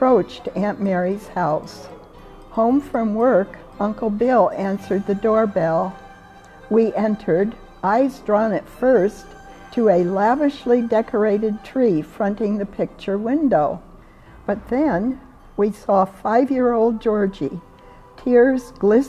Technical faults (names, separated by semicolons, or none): none